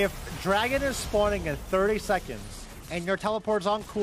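At 2.37 s a congested Bluetooth link forces an SBC bit pool drop, which fits a fall from about 28 to 13: the treble dulls and gritty noise persists to the end.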